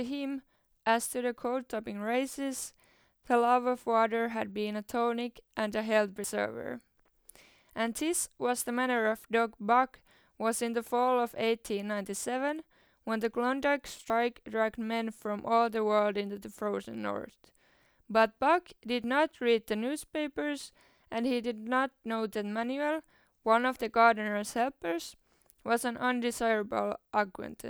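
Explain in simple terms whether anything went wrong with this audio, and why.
The speech skips forward at 6.24 s, 14.1 s and 19.04 s, each time losing a few hundredths of a second. That's most likely a dropped buffer (overrun): the recorder fell behind, a chunk got overwritten, and the edges were stitched together.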